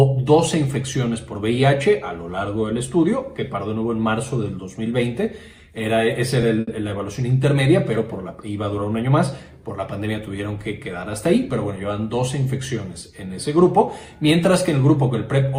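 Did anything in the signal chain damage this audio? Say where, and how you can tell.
Yes. The damage sits at the network stage, in the receiver's jitter buffer. There is a short stall from a late packet at 6.60 to 6.69 s. The sound there is held too long, with a slight buzz or dip. A packet missed its playout time and the buffer ran dry. The receiver stretched the last sound to fill about 70 ms. It then resumed from the same point. Nothing is lost, but everything after plays 70 ms later.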